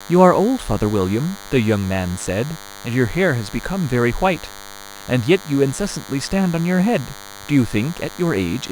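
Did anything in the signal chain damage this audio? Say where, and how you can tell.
Yes. A DECT cordless phone buzz sits under the speech for the whole clip: a thin, steady 100 Hz tone with a dense harmonic series, roughly 20 dB below the speech. It enters in the analogue wiring, where a nearby handset's 10 ms radio bursts are rectified into audio.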